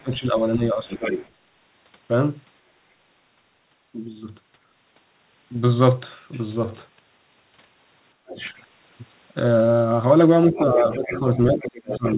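From the start to 0.88 s the speech dips by around 15 dB, and from 8.19 to 8.4 s it drops much deeper, by roughly 35 dB. It dips again by about 20 dB from 10.49 s to the end. These dips are likely speech suppressed in double talk. Unlike a plain level drop or dropout, each dip coincides with a second voice, so the suppressor is clamping down on the talker while both sides overlap.

That second voice is likely the other side's voice leaking through, left over from loudspeaker echo the canceller failed to remove. It can be heard from 0.11 to 0.56 s at about 20 dB below the talker and from 0.9 to 1.29 s at about 10 dB below. It returns from 8.34 to 8.6 s at about 20 dB below and from 10.58 s onward at about 10 dB below. Because it is a distinct, separate voice rather than a delayed copy of the talker, it is a leak and not a self-echo. Like everything on this G.711 call path, it is band-limited to nothing above 4 kHz.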